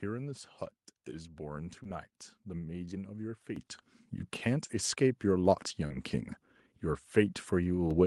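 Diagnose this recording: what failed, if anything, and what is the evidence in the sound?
Short concealed packet loss on the network leg: brief smears at 1.83–1.87 s, 4.67–4.71 s and 5.87–5.98 s, where the decoder stretched the last sound over missing packets.

Microphone volume stepped up by the call processing's automatic gain: everything, background included, jumps by about 10 dB at 3.56 s and about 3 dB more at 7.91 s.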